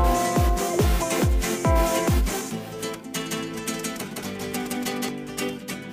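From 3.17 to 5.09 s a doubled audio track appears: a second, equally loud copy trails by roughly 150 ms, likely from a slower capture path.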